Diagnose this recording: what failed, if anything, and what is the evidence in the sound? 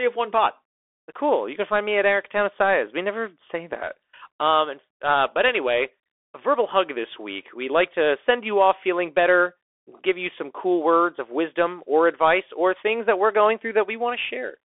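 Codec stage: the whole speech clip has passed through a Bluetooth CVSD headset codec. Nothing reaches above 3.8 kHz, the band sits at 300 Hz to 3.5 kHz, and the damage is plainly audible throughout. The single-bit slope tracking fits a 64 kbps link.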